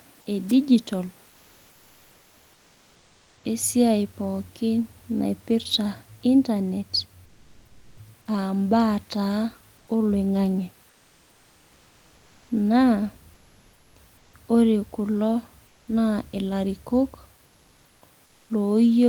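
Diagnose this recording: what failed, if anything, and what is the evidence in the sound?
Wireless microphone squelch dropout at 0.48 to 0.53 s: a brief hiss burst and a near-instant mute as the analogue FM receiver's squelch closes on a fading radio signal.

Comfort noise in place of the background, likely from Opus DTX at the codec stage: at 1.29, 7.25, 9.77, 10.89, 13.33, 15.67 and 17.45 s, lasting 0.1 to 2.1 s, the room noise becomes flat, featureless hiss, about 2 to 7 dB quieter. One replacement ends at "esuiai pooki naipirta internet", and the next begins just after it.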